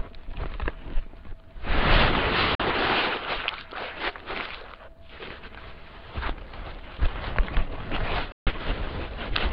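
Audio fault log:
2.55–2.60 s and 8.32–8.47 s, Bluetooth dropout: the sound cuts to silence for about 44 ms, then about 145 ms, with abrupt or briefly faded edges, and resumes further along as if it had kept playing. This is likely wireless packets arriving too late and being discarded, consistent with roughly three and ten lost packets.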